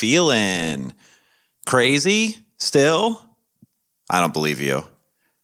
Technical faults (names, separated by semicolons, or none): none